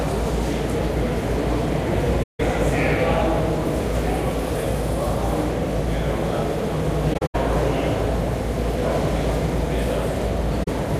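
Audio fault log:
2.22–2.40 s, 7.13–7.35 s, 10.63–10.68 s: AAC frame loss with muting. The decoder zeroed missing frames, leaving gaps of about 170, 150 and 43 ms. Overlapping windows fade each edge, so the holes are soft-edged, unlike hard dropouts. The middle gap is broken, with the longest run about a tenth of a second.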